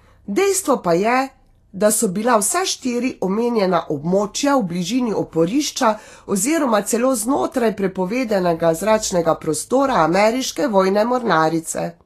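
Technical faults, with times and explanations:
Throughout: Vorbis compression. The speech was likely squeezed through the Vorbis codec at a low setting, which fits a bitrate of around 34 kbps. The encoder discards everything above 14.2 kHz and quantises the remaining treble so coarsely that fine high-frequency detail is replaced by noise of similar energy. The result is plainly audible: sibilants and breathy consonants turn hissy and grainy, voiced tones take on a rough edge, and sharp onsets sound smeared.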